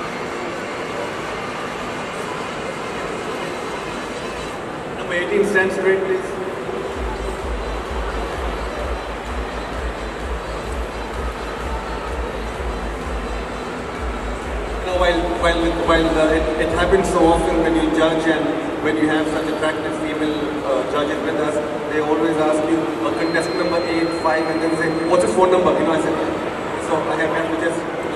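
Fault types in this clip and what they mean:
feedback whistle: a thin, slightly wavering 4.2 kHz tone well below the sound from 23.08 to 25.44 s, likely a speaker-microphone loop near feedback; unlike howl, it never grows.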